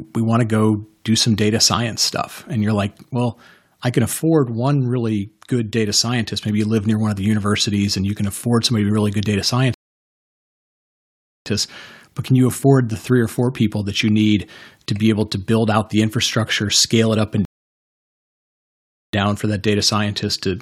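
At 9.74 s the speech drops into silence for about 1.7 s, picking up again at 11.46 s, and at 17.45 s it happens again for roughly 1.7 s until 19.13 s. Both are rebuffering stalls: the player ran dry of downloaded audio and just waited. Nothing's skipped, it resumes right where it left off, but each gap stretches the timeline.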